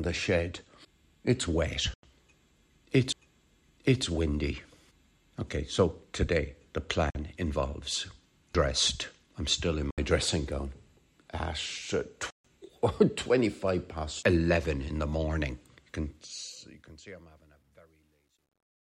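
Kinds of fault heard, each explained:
Bluetooth dropout: The sound cuts to silence with hard edges and resumes as though it had kept playing underneath, which is likely packets failing to reach the headphones in time. There are four holes, at 1.94 s (93 ms), 7.10 s (46 ms), 9.91 s (70 ms) and 12.30 s (139 ms). Every length is a whole multiple of roughly 23 ms, which points to a few lost packets of that size each time.
CD skip: A laser jumping to a different turn of the disc's spiral makes the player mute for an instant and carry on from another point. Here it is heard twice, at 3.13 s and 8.54 s, each as a brief tick from a mute lasting only a few milliseconds. Each is followed by a sudden discontinuity where the playback position has jumped.
Truncation distortion on a fade: When a digital gain stage keeps too few bits and adds no dither, low levels collapse into coarse steps. The fade-out begins around 15.9 s. 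From 15.89 s to the end, the tail gets progressively grainier as it drops, consistent with about 11-bit resolution. From 16.96 s it is worst, turning gritty.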